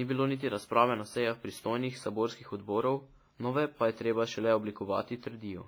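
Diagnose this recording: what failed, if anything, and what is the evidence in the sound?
Codec stage. The speech rings and smears throughout, with hiss pumping alongside it. Likely heavy WMA compression, consistent with a 24 kbps stream, its long blocks smearing noise and dropping weak detail.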